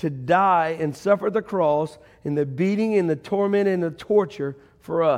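Speech recording with no audible technical faults.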